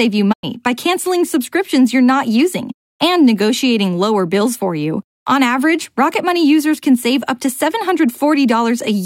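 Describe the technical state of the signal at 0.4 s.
A digital broadcast dropout runs from 0.32 to 0.45 s. The receiver stopped getting valid frames and muted, so the sound fades to silence over about 20 ms, leaving a hole of roughly 96 ms, consistent with a few lost frames, before returning.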